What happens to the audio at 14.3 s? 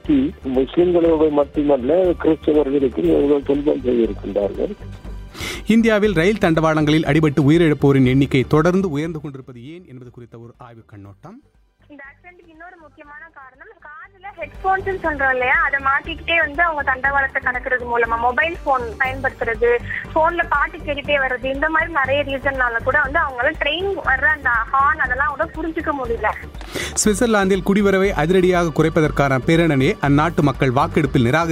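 Zipper noise runs from 14.19 to 14.59 s: a level change of about 20 dB applied in unsmoothed steps of about 2 dB, roughly 40 a second, each clicking audibly. The waveform shows a staircase envelope, and the spectrogram shows faint broadband vertical ticks.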